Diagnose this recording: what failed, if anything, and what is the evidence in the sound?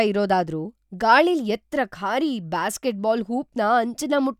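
Nothing failed: no stage in the chain, from capture to playback, leaves any audible trace in this speech recording.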